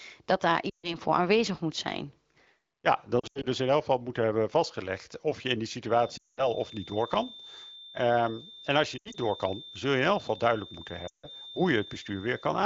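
It's a wideband speech clip with lost AMR speech frames at 0.69–0.96, 3.19–3.46, 6.17–6.48, 8.97–9.15 and 11.08–11.28 s, where the decoder fades the sound to near silence. The 3.19 and 8.97 s losses are scattered dropouts rather than one gap. From 5.85 s to the end there's a thin 3.6 kHz feedback whistle sitting about 20 dB under the speech, likely a loudspeaker-to-mic loop hovering just short of howling.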